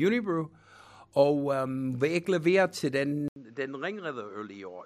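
Speech, where the input likely switched to a poorer device at 3.28 s. After an 80 ms gap, the sound turns duller and quieter, with nothing above 7.6 kHz and a new, faint background noise.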